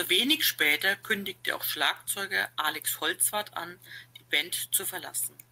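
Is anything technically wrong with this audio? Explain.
No, nothing technically wrong turns up in this speech recording; it's all in good shape from a technical point of view.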